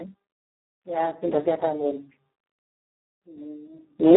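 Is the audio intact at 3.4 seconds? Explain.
No, at 3.4 s the Speex codec damage is still there, as throughout: starved CELP excitation, likely near 4 kbps, makes speech hoarse and robotic, with nothing above 3.9 kHz.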